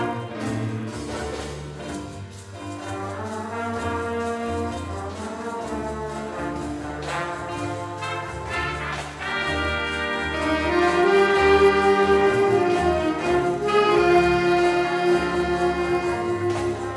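Throughout the audio there is a steady 100 Hz buzz, present only while signal is playing. It comes from a resampler restarted on every block. The 48 kHz to 24 kHz conversion ran on each 10 ms block in isolation, leaving a small error at every block boundary.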